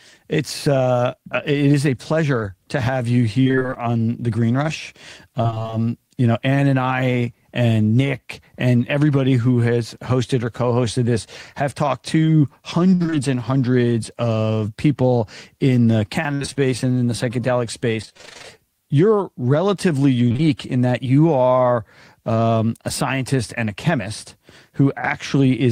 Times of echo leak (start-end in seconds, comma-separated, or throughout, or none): none